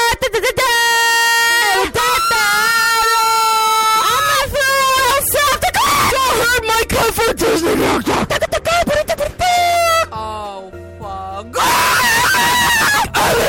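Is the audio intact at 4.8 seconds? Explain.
Yes, the audio at 4.8 seconds is intact, with no dropout, click, distortion or other fault at that moment.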